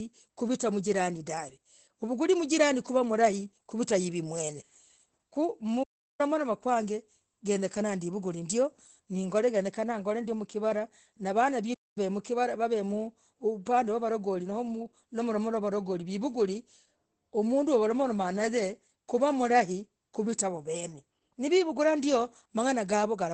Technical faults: Opus voice compression; playback stall

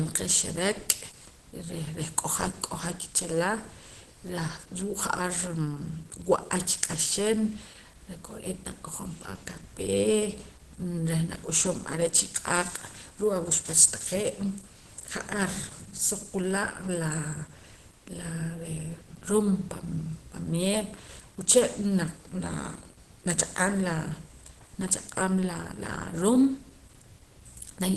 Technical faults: Opus compression; dropped samples

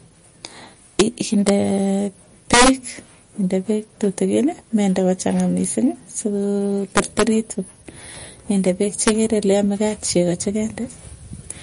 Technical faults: MP3 compression; integer overflow

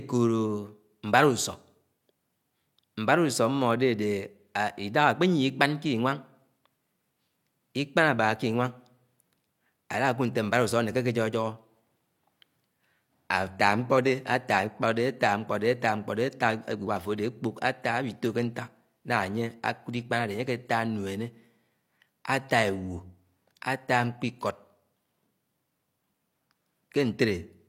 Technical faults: adaptive stream at a lower bitrate

